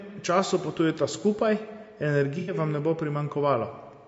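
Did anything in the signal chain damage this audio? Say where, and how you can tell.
Yes. At the codec stage the speech sounds rough and grainy throughout, with noise between harmonics, likely from low-delay AAC compression, consistent with AAC-ELD near 32 kbps.

At the network stage, AAC frame loss with concealment causes a smeared, noisy patch from 2.39 to 2.54 s. The decoder bridged about 90 ms, which fits three lost frames.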